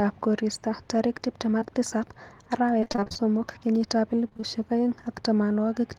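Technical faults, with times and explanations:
1.59–1.65 s, short concealed packet loss: about 20 ms of audio failed to arrive in time. The receiver bridged the hole by extending the preceding sound for roughly 18 ms, then blended back into the real signal, leaving a brief smear and stretching timing by about 10 ms.
2.80–3.21 s and 4.29–4.44 s, repeated packet loss (robotic sound): holes of up to 28 ms recur in quick succession, so about half of each stretch is synthesised continuation of the previous sound. The constant patching produces a choppy texture with fragments missing.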